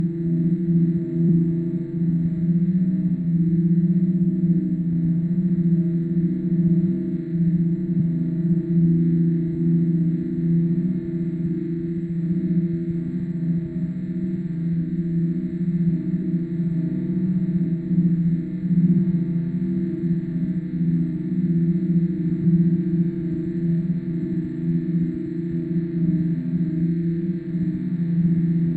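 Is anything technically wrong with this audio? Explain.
Yes. Compressed frames are skipped four times, at 7.99, 16.21, 22.43 and 24.22 s. Whole blocks of the encoded stream never reach the output, either missing from the file or rejected by the decoder as damaged, so the sound jumps forward. Each gap drops roughly a tenth of a second at 7.99 and 22.43 s and roughly 150 ms at 16.21 and 24.22 s, which fits runs of frames about 23 ms long. Each join is heard as a brief blip or click.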